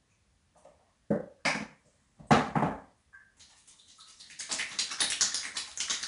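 Throughout, the audio carries plainly audible 4-bit ADPCM compression. Each sample is stored as a coarse step from a prediction. The error is noise that follows the level, heard as a gritty hiss on loud moments. Nothing reaches above 10.6 kHz, which fits an 88 kbps stream.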